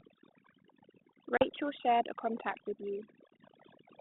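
A noise reduction stage was set far too aggressively, so for the whole clip it pulls individual frequency bands down or shuts them off whenever they sit near its noise estimate. The quieter parts of the speech vanish with them, leaving a near-silent background dotted with twinkling specks.

From 1.37 s to about 1.50 s, packet loss on the ADPCM call removes around 40 ms of audio, a few packets' worth, and fills the gap with silence. Through the 32 kbit/s G.726 link, band-limited to 200 Hz to 3.7 kHz, the decoder's adaptive predictor and step size lose track of the sender's, so after the hard-edged hole the speech returns slightly distorted before settling.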